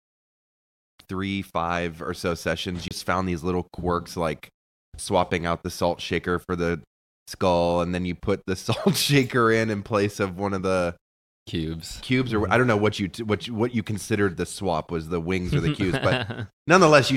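A speech recording with a CD skip at 2.88 to 2.91 s: a physical knock or a flaw in the disc sent the player's laser onto a different turn of the spiral track, so playback mutes for roughly 30 ms and resumes from another point in the audio. Unlike a plain dropout, which returns to the same place after the gap, the speech picks up out of continuity rather than where it left off.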